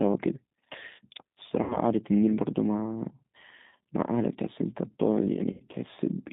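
The whole clip runs through the G.729 codec. The speech sounds slightly rough and synthetic, which points to an 8 kbit/s link. The sound rebuilt from a vocal tract filter and a few pulses per frame. Nothing above about 3.7 kHz or below 150 Hz survives.

VoIP packet loss concealed by the speech codec occurs three times. At 1.64 to 1.80 s, about 60 ms of audio goes missing. The decoder repeats its last pitch and filter. The sound stretches into a fading buzzy tone or coloured noise and stays weak or distorted after the gap. At 3.69 to 3.72 s, a 20 ms loss gives a brief stretched sound. At 5.52 to 5.62 s, an 80 ms loss produces the longest fade.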